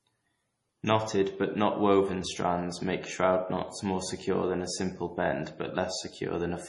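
Speech, and the whole thing has MP3 compression damage, likely from a low-bitrate encode. Nothing comes through above 11.2 kHz, and the heavy swirly, watery texture on the s sounds fits something around 32 kbps starving the encoder of bits.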